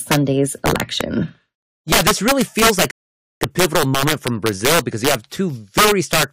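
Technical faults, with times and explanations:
Throughout: integer overflow. The speech was pushed about 6 dB past the largest value the integer format can hold, and instead of being limited, the loudest samples wrapped around to the opposite extreme. Only a small share of the signal, around two percent, crosses the limit, so the damage is confined to the loudest speech peaks as violent, snapping cracks. Clipping would flatten those peaks into a buzzy, fuzzy distortion; here each one jumps across the full range, so it sounds far sharper and more explosive.
2.91–3.41 s: rebuffering stall. Right after "this really feels like" the audio stops dead into silence for about 0.50 s, then continues with "a pivotal moment" from exactly where it left off. The player had run out of downloaded audio and waited for more to arrive before going on. This is not a dropout, because no speech is missing. The phrase is intact on both sides of the gap, and the pause simply adds half a second to the running time.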